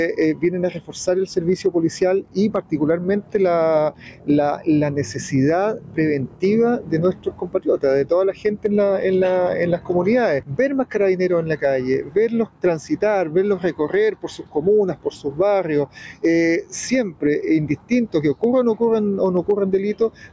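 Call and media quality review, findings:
Gain pumping, whole clip: gain ducks by around 10 dB under each loud sound; dynamics squashed flat. Likely mic gain set way too hot, with a fast limiter clamping down on peaks. Call mic processing band-limited to 8 kHz as expected.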